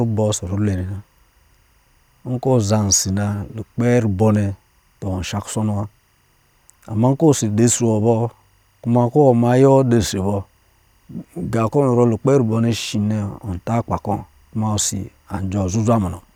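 Timecode bleed runs through the whole speech clip, from start to finish. Linear timecode from an adjacent track or cable has leaked into the audio path. Its square-wave signal switches between tones around 1 kHz and 2 kHz, clocked at 24 frames per second. Sitting very low, roughly 45 dB under the speech, it is heard as a faint, steady chirping warble beneath the talker.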